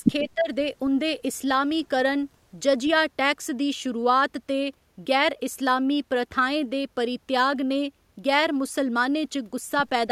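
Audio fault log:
0.22–0.49 s, speech suppressed in double talk: speech dips about 10 dB in patches, showing as a pinched waveform and faded spectrogram bands, likely an echo canceller ducking overlapping talk.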